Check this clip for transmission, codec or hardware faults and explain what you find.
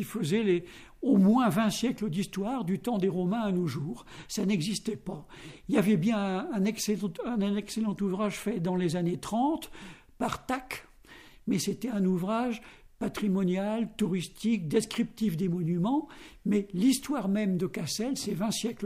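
No transmission or hardware problems can be heard here.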